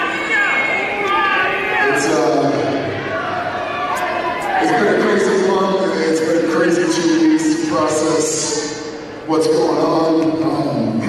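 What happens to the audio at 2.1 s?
Nothing goes wrong at 2.1 s; the audio carries on intact through that moment with no dropout, click, distortion or other fault.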